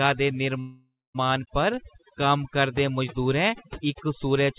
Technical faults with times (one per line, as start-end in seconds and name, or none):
0.00-4.58 overdone noise removal
0.60-1.16 call audio freeze